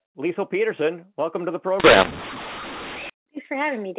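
A mu-law and A-law mix-up runs from 1.80 to 3.10 s, starting right after "welcome to the". The speech was coded with G.711 mu-law but decoded as A-law, so the logarithmic level steps are mapped onto the wrong curve. Loudness gets scrambled, some peaks too strong and others too weak, and the quietest samples jump well above silence. The speech turns harsh and gritty, and pauses fill with noise, all within the 4 kHz telephone band.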